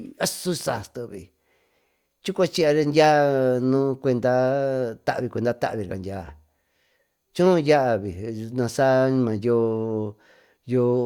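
No technical faults can be heard in this recording.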